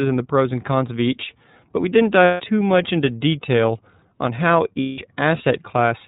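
Throughout, the speech is capped below 4 kHz and sounds rough and synthetic, the mark of the iLBC codec, consistent with its 13.33 kbps, 30 ms frame mode. At 2.25–2.41 s, after "each but we didn't", and 4.8–4.99 s, after "into detail on how", a held buzzy vowel fills 150 ms and then 180 ms. These are lost iLBC frames, which the decoder patched by repeating the last pitch cycle with noise.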